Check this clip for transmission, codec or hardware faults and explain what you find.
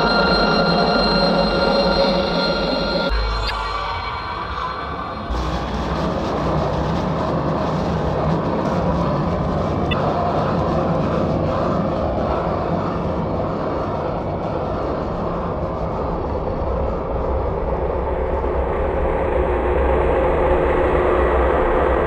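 Two short codec faults are audible, both from damaged data in a compressed stream. The first runs from 3.46 to 3.51 s, the second from 9.89 to 9.93 s, each lasting about 44 ms. At both points part of the encoded stream is corrupt, so the decoder cannot parse the affected frames, drops sync and hunts for the next valid frame header. Each event is heard as a brief chirp or blip cutting across the audio.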